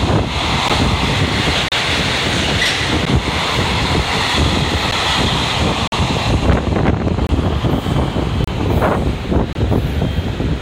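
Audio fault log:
0.69, 1.68–1.72, 3.05, 4.91, 5.88–5.92, 7.27–7.29, 8.44–8.48, 9.53–9.55 s: block of digital silence. The sound drops to silence for 12 to 46 ms, likely from output buffers that were not filled in time. These 12, 23 and 46 ms gaps fit whole 512-sample buffers. The edges are hard and unfaded, unlike a fade-out or a noisy dropout.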